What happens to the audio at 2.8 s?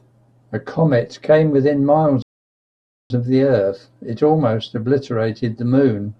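At 2.8 s the speech is in the middle of a rebuffering stall, which runs from 2.22 s to 3.10 s. The player used up the audio it had downloaded and paused until more data arrived, so the sound drops to silence for about 0.88 s. It then picks up exactly where it broke off. No speech is skipped or repeated. The gap just adds almost nine-tenths of a second of dead air to the timeline.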